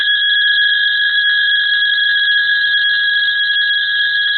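Throughout the music, tones sound rough, grainy and noisy. Nothing is heard above 5.6 kHz. The damage is heavy and likely comes from Opus compression at a very low bitrate, near 8 kbps. Starved bands are filled with noise or folded copies, not real detail.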